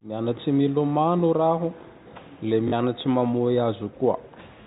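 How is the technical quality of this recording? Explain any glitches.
The recording has one glitch, a brief stutter in the telephone-band speech, which is cut off above 4 kHz.

At 2.68 to 2.72 s, packet loss with the last packet repeated fills a 40 ms gap, which fits two lost 20 ms packets. Replaying the same slice twice makes a buzzy robotic stutter near 50 Hz rather than the silent hole of a plain dropout.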